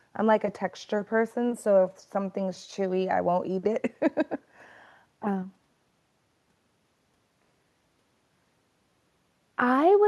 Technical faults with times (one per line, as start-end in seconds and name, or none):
none